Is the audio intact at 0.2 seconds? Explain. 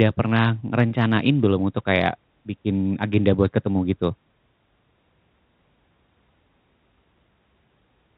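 Yes, the speech at 0.2 seconds is intact, with no fault at that point.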